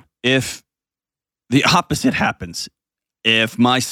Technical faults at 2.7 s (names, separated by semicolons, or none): none